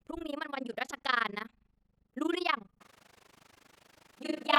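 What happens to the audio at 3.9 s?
At 3.9 s the speech is inside a switch to a distant microphone. It starts abruptly at 2.80 s and runs to the end. The voice turns roomy and hollow, with thinner bass and faint room noise well below the speech. The level stays about the same. The likely cause is the close microphone dropping out, leaving a farther one such as a camera mic.

Overlap-add ripple is also present there, as it is throughout. The frames were rejoined with overlaps that do not sum to a steady gain. The level swings by about 60 dB around 30 times a second, which gives a harsh, fast flutter.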